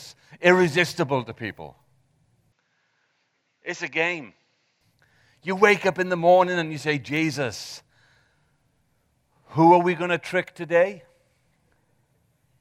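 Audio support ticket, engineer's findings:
Input switched to a poorer device, 2.52–4.81 s. Speech abruptly dulls: nothing above 7.6 kHz, about 5 dB quieter, different low noise floor roughly 50 dB down. No gap at either switch. Likely cause: capture path rerouted to a narrower-band microphone, then back.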